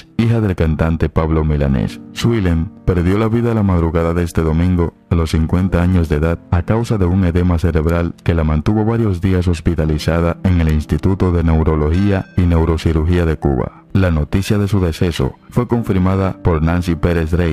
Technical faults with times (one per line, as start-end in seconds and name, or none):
0.00-17.52 periodic clock jitter